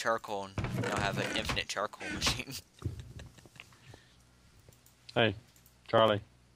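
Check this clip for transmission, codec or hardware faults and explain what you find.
Regular ticks run from 2.22 s to 6.48 s, spaced 0.099 s apart, around ten per second, roughly forty in all. These are periodic USB or driver dropouts: something stalls the bus or audio driver on a fixed cycle, and about a millisecond of audio is skipped each time, leaving a click.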